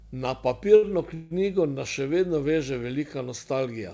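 At 0.76 to 0.84 s comes a short stall from a late packet. The receiver ran out of audio and stretched the last sound for about 66 ms until the packet turned up. It is heard as one held, faintly buzzing sound rather than a gap. Nothing is skipped, and the speech resumes exactly where it paused.

From 1.14 to 1.33 s there is a longer call audio freeze, just before "nas še vedno veže". For about 161 ms the last sound carries on as a buzz that fades but never drops to silence, likely because packets were held up and the jitter buffer ran dry. Unlike the brief stall, it puts a clear pause into the flow. The speech then continues with nothing missing, still limited to the 8 kHz band of the call codec.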